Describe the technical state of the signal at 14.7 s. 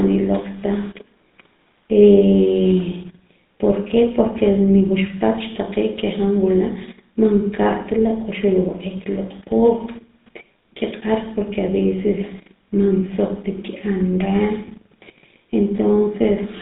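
At 14.7 s the audio carries two GSM faults. From 14.66 to 14.69 s there are lost GSM frames, with about 20 ms of missing signal, which fits a single dropped frame. The decoder covers the gap by reusing the last good frame's vocal-tract and excitation settings, so the speech turns briefly into a rough, metallic ring. Unlike a plain dropout, the gap never goes silent. It is smeared over by that frozen ringing.

The GSM full-rate codec is also present here, as it is across the whole clip. The damage fits 13 kbit/s full-rate coding and is plainly audible. The codec models the voice as a filter driven by regular pulses and keeps only a thinned excitation, which produces a steady buzzy, gravelly roughness. The line band runs from 150 Hz to 3.7 kHz. Unlike simple low-pass filtering, the texture itself is coarse rather than just dull.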